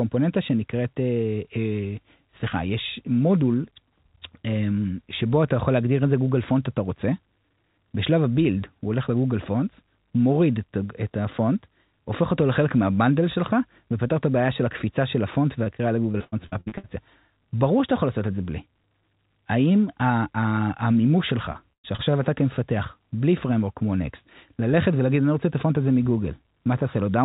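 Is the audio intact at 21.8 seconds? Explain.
No. From 21.53 to 22.12 s the audio suffers repeated packet loss (robotic sound): four holes, the longest about 110 ms, each patched by stretching the last bit of sound, so roughly a third of that stretch is filler. Unlike a single dropout, which leaves one clean silence or click, these closely spaced patches make the narrowband call audio (nothing above 4 kHz) sound choppy, with fragments missing.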